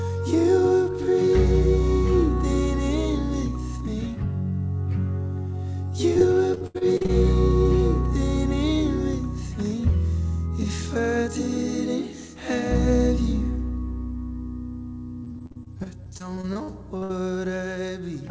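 Repeated packet loss (robotic sound) hits from 6.14 to 7.10 s and again from 15.24 to 17.11 s. Short holes of up to 77 ms and 59 ms, each patched by stretching the last sound, make the audio choppy and robotic below the call path's 8 kHz ceiling.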